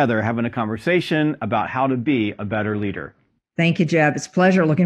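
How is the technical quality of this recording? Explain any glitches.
The quality drops for two seconds mid-clip. From 1.57 to 3.57 s, just after "having a conversation", an adaptive stream at a lower bitrate takes over because the connection slowed. The sound points to a fall from about 96 to 24 kbit/s, leaving nothing above 10.3 kHz, so the speech turns dull and smeared with no gap.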